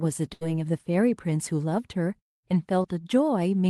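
At 0.33 to 0.43 s a burst of packet loss drops about 80 ms of speech. The receiver stretched the last sound and faded it out, visible as a smeared, decaying continuation before the waveform jumps ahead. At 2.83 to 2.86 s, short concealed packet loss removes about 20 ms, patched with brief synthetic continuation. It is audible as a tiny smear or wobble and shows on the spectrogram as a blurred sliver. The call-codec background above roughly 12 kHz appears empty on the spectrogram, consistent with the Opus path's band limit.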